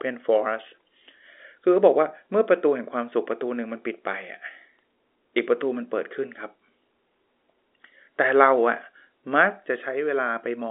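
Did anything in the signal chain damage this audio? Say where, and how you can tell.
No, nothing in the chain has harmed this speech; the narrow sound is just the G.711 telephone coding it went through, which keeps it to a line band of 300 Hz to 3.6 kHz with nothing above 3.8 kHz.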